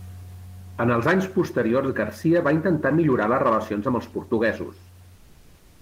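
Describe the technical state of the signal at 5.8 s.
At 5.8 s the real background has been replaced by comfort noise, from 5.15 s to the end of the clip, about 0.67 s. Once the sound pauses, the room noise, about 39 dB below the speech, gives way to a steady, featureless hiss roughly 5 dB quieter. The likely cause is discontinuous transmission of the kind Opus DTX uses: the sender goes quiet in the pause, and the receiver synthesises roughly shaped noise in its place.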